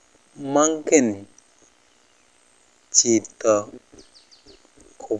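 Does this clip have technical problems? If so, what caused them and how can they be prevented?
No, there are no technical problems to report in this recording, so nothing needs to be traced or prevented.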